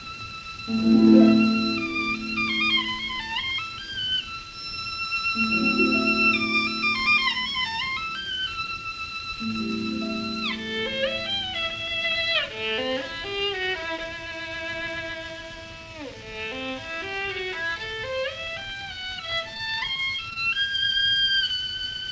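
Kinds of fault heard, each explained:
Feedback whistle: The loop from loudspeaker back into the microphone is most likely hovering at the edge of feedback. The result is a thin, steady 5.4 kHz whistle from 4.48 to 7.95 s, sitting roughly 15 dB under the main sound and swelling and fading slowly in level.
Repeated packet loss (robotic sound): Between 19.54 and 20.37 s, ten packets went missing or arrived late. Each gap, the longest 24 ms, was bridged by stretching the preceding sound, so about a fifth of that stretch is patched, giving a choppy, robotic texture.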